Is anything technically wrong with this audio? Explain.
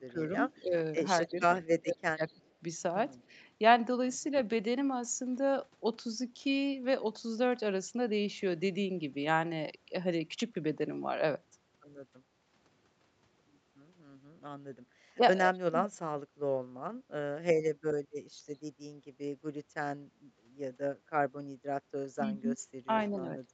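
Yes, there are two kinds of fault, and they show up together.

Speech suppressed in double talk runs from 0.0 to 2.5 s, 15.17 to 15.91 s and 22.15 to 23.5 s. The level ducks in chunks by up to about 30, 35 and 20 dB, for roughly a second, a third of a second and half a second in total. Likely the echo canceller couldn't tell the talker from loudspeaker echo while both sides spoke, so it turned everything down.

Echo leak shows up at 2.45 to 2.52 s, 3.22 to 3.35 s and 22.98 to 23.04 s. These are short, faint scraps of voice trailing 223 ms behind, around 40 dB down, and about 25 dB down on the last one. Likely the far end's echo canceller let some loudspeaker pickup slip through and sent it back.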